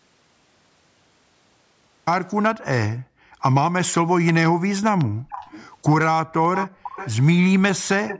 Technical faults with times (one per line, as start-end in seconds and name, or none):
0.00-2.07 audio dropout to silence
2.95-3.34 background gated by the echo canceller
5.05-5.29 background gated by the echo canceller
5.29-5.69 echo leak
6.55-7.13 echo leak
6.68-6.83 background gated by the echo canceller
8.07-8.19 echo leak